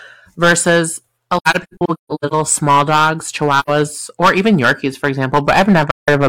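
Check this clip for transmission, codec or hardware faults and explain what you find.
Two faults are present: hard clipping across the whole speech clip, and three stretches of AAC frame loss with muting.

Hard clipping runs throughout. Some stage in the chain was driven about 13 dB beyond what it could pass, so the peaks of the waveform are sliced flat, around one sample in twenty. Those squared-off tops generate harmonics high above the speech itself, and at this depth of overload the result is a harsh fuzz riding on every loud syllable, not just an occasional crackle.

AAC frame loss with muting occurs three times. Whole coded frames went missing, and the decoder replaced each with silence instead of guessing at the content. Because AAC frames overlap, each gap fades out and back in over a frame's length, leaving soft-edged holes. From 1.37 to 2.33 s, between "versus a" and "small dogs", about 600 ms is lost in scattered dropouts over roughly 940 ms, the longest run around 150 ms, so the sound stutters repeatedly. 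From 3.59 to 3.69 s, between "small dogs" and "or even", an 85 ms hole appears. From 5.91 to 6.09 s, a 171 ms gap cuts out near the end.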